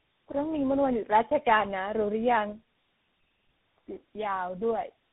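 Speech clip with tandem speech coding throughout: it sounds like three speech coders in a row, each re-coding the last one's damage, so it's rough, warbly and muffled, with nothing above 3.8 kHz.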